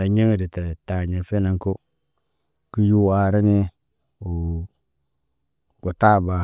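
Speech, with nothing technically wrong to point to.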